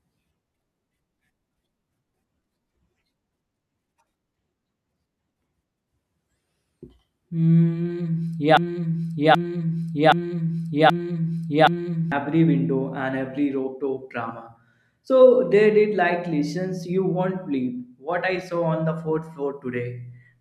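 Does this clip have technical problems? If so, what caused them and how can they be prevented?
Yes. From 8.57 to 12.12 s the speech falls into a broken-record loop: a single 0.78 s fragment repeats five times back to back, likely because the player or stream stalled and kept resending its last buffer. The audio that belonged there is lost before "window and every rooftop". On a spectrogram the same block of patterns tiles identically, and the waveform shows one shape copied end to end. A larger jitter buffer, plus a watchdog that outputs silence instead of replaying stale data, would prevent it.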